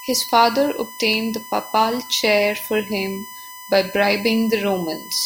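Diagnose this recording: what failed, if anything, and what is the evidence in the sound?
USB whine runs through the whole recording: a steady, fixed-pitch tone at 1 kHz sits under the speech from start to finish, roughly 15 dB below it. The fault is in the analogue wiring, at power and ground. The USB bus draws current in 1 ms frames, and that 1 kHz pulsing leaks through the supply or a shared ground into the analogue input ahead of the converter.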